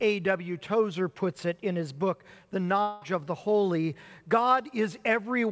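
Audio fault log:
2.82 to 3.03 s, long network dropout: for about 0.2 s the receiver fills the gap with a fading buzz or hiss that continues the last sound, then the audio resumes with that stretch gone, likely because packets stopped arriving over this 8 kHz-limited call path.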